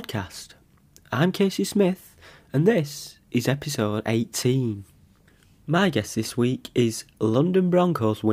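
No technical faults can be heard anywhere in it.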